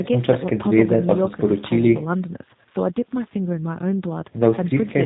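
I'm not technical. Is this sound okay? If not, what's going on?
No. From start to finish the speech sounds slightly rough, buzzy and robotic, with the crisp top end missing. That comes from the G.729 codec, a phone-call compression method that rebuilds the voice from a rough model.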